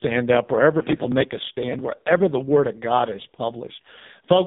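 From start to finish the speech goes through an AMR narrowband mobile codec, and it's heavily mangled. There's nothing above about 3.8 kHz and the band sits roughly 150 Hz to 3.7 kHz. The buzzy, synthetic pulse-driven texture points to one of AMR-NB's lowest modes, around 5 kbps.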